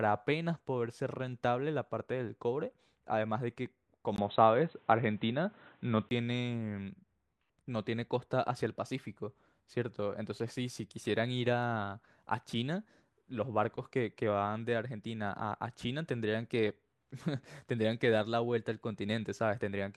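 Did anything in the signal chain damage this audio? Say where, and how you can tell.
Yes. From 4.16 to 6.11 s the speech turns dull and boxy, with nothing above 4 kHz, a brief dropout of about 20 ms at the switch, a level shift of around 5 dB and a new background noise roughly 40 dB down. This is likely an input switched to a poorer device at the driver stage.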